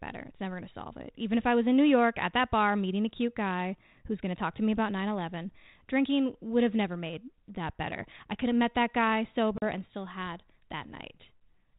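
At 9.58 s, packet loss on an ADPCM call cuts a hard-edged 40 ms silence, about two packets' worth, into the 32 kbit/s G.726 speech. Unlike a plain dropout, the return is disturbed while the decoder's adaptive predictor and step size realign with the sender's.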